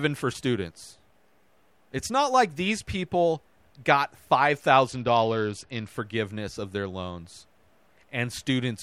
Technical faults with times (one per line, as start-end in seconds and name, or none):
4.87-5.88 Bluetooth SBC bit pool drop